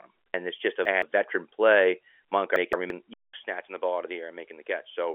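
Audio chunks were delivered out of order twice. From 0.34 to 1.02 s, a segment of about 171 ms plays roughly three segments late. From 2.56 to 2.90 s, another plays one segment late. Each leaves a jumbled stretch of speech with hard joins.

At 3.14 s the input likely switched to a poorer device, leaving a 200 ms gap. Afterward the audio is duller and boxier, with nothing above 3.8 kHz, a few dB quieter, and a new faint background noise underneath until the end.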